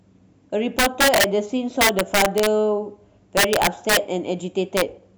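Integer overflow breaks into the speech four times: 0.79 to 1.24 s, 1.81 to 2.47 s, and 3.37 to 3.97 s, each driven about 6 dB past full scale, then a brief burst from 4.77 to 4.82 s at about 2 dB over. Loud peaks wrap around to the opposite extreme instead of being held at the limit, so each one snaps across the whole range as a violent crack. Clipping would flatten those peaks into a duller buzz.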